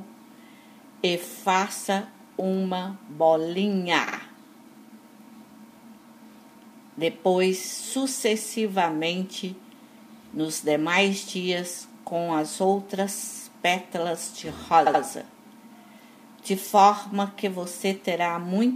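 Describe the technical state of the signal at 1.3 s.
A short run of compressed frames was repeated from 1.30 to 1.35 s, so the decoder plays that 52 ms block a second time, producing a brief stutter and lengthening the audio by 52 ms.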